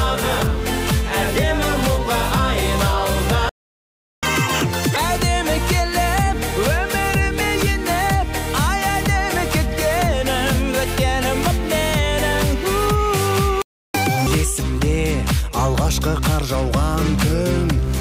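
At 3.49 s the sound just cuts out for about 0.73 s, a playback stall, most likely the player running dry or its thread getting blocked. When it comes back at 4.23 s there's catch-up at higher speed: through 4.96 s it runs at double speed, pitch jumped up roughly ten semitones, burning through the backlog before settling. The same thing happens again later. A shorter stall of about 0.32 s from 13.62 to 13.94 s, then another double-speed, high-pitched catch-up burst to 14.27 s.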